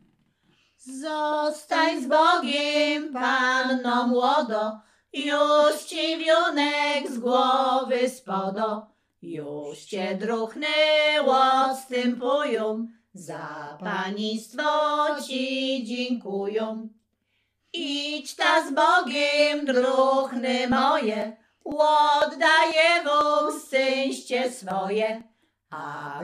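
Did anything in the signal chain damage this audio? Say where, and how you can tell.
Yes. From 20.72 to 25.21 s a regular tick sounds every 0.5 s, about ten in all. These are periodic USB or driver dropouts: at the interface driver stage, something stalls the bus on a fixed cycle, and roughly a millisecond of audio is skipped each time.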